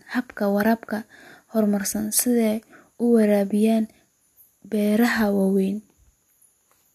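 Speech recording with no audible technical faults anywhere.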